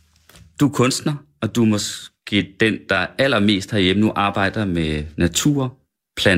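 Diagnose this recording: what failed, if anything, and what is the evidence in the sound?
Nothing in the signal chain has failed, and the speech signal stays continuous and intact throughout the recording.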